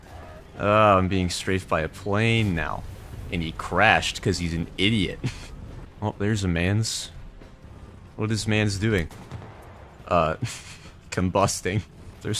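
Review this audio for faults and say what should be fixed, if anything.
Nothing here needs fixing; I listened all the way and didn't hear a single fault in the audio.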